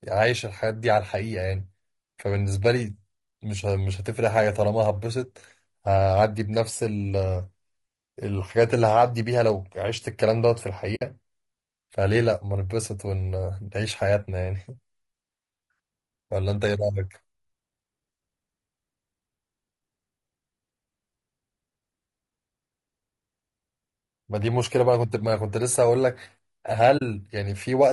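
Throughout the speech, low-delay AAC compression is likely: harmonics sound rough and grainy, with noise smeared between them on a spectrogram and a thin, synthetic-looking top band, fitting about 32 kbps AAC-ELD. At 10.95 to 11.02 s and again at 26.97 to 27.02 s, AAC frame loss with muting leaves soft-faded gaps, roughly three and two lost frames, appearing as blank vertical strips.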